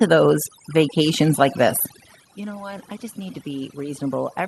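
Speech with room noise in the background, where the background breaks up into twinkling, warbling specks from start to finish. That is overdone noise removal: the suppressor is set so strong that it pulls individual frequency bands down or out whenever they sit near its noise estimate, taking quieter parts of the voice with them. Around 2 s the talker moves and the voice drops, with the level at the microphone falling by about 14 dB. From 2.37 s to the end at about 4.48 s, voice and background swell together. This is automatic gain rising, as the gain control hears the quieter input and lifts its gain gradually. The call path's high end stops at 12 kHz, which fits Opus at a modest bitrate such as 32 kbps.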